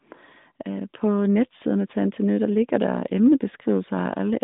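No technical faults turn up in this speech, which carries the expected sound of the AMR narrowband mobile codec: a telephone band of roughly 150 Hz to 3.7 kHz, nothing above about 3.8 kHz, and only light coding coloration that fits its highest 12.2 kbps mode.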